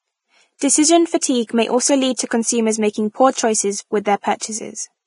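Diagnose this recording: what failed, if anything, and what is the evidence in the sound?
Codec stage: the speech is grainy and hissy throughout, with nothing above 10.5 kHz. The cause is likely Vorbis compression at roughly 28 kbps. Unlike steady analogue hiss, this noise follows the speech.

Pre-echo at 0.58–0.61 s: a 30 ms hiss leads a sharp attack, because block-wide quantisation noise fills the quiet gap. Unlike a click, it rises before the onset.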